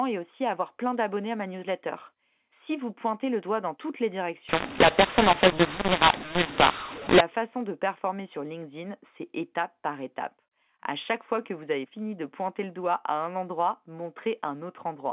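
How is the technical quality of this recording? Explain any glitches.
The recording is telephone-band G.711 mu-law speech with nothing above 4 kHz, and it has one glitch. From 4.49 to 7.21 s the speech turns harsh and gritty, with distorted peaks and pauses filled with hiss. This is a mu-law and A-law mix-up: mu-law bytes are decoded as A-law, so levels are scrambled and near-silent samples are pushed well above zero.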